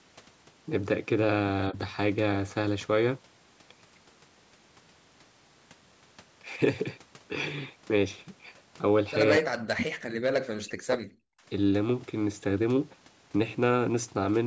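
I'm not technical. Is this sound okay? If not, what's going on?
No. The voice gets turned down at moments, most likely because both people talked at once. This is called speech suppressed in double talk. There is a faint dip at 1.7 s, then the voice nearly vanishes from 9.39 to 9.91 s and again from 10.58 to 11.41 s.

There is also an echo leak. At 9.82 s, a short, quieter copy of the voice slips through about a quarter of a second late. The likely cause is the far side's loudspeaker sound reaching its microphone and being sent back.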